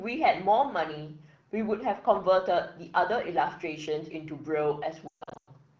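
From 5.07 to 5.49 s, lost AMR speech frames: about 320 ms of frames fail, scattered across 400 ms, the longest run 140 ms. The decoder repeats the last pitch and vocal tract settings at falling gain, giving brief warbles that drop to near silence within two frames, not hard clicks.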